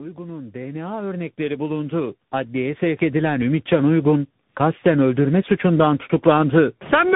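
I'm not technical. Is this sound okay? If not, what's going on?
No, it isn't. Two problems can be heard.

Throughout the clip the speech sounds rough, dull and wobbly, as if heard down a poor phone line. Nothing above 3.8 kHz gets through, so crisp sounds like "s" are blunted. This is tandem speech coding. The call passed through two different speech-squeezing systems one after the other, and each one unpacked and re-squeezed what the first had already damaged. The flaws stack up, so it sounds worse than either system would on its own.

From 0.11 s to 3.99 s, just before "kasten öldürme suçundan", the whole sound slowly grows louder. The speech and the background rise together, ending up much louder than where they started. This is automatic gain rising. The equipment judged the incoming sound too quiet and gradually turned up its own volume over nearly four seconds. Because it boosts everything, the background noise swells along with the speech.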